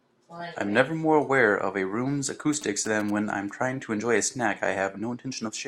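From 2.53 to 3.10 s, GSM signalling bursts break into the speech as a galloping dit-dit-dit of ticks and brief buzzes, sitting roughly 15 dB below the voice. A nearby 2G phone's short radio bursts are being rectified by the audio circuitry, and the buzz repeats at about 217 Hz, the GSM frame rate. Mains hum is a steady, continuous 50 or 60 Hz tone, whereas this interference arrives in clustered, stuttering groups lasting just over half a second.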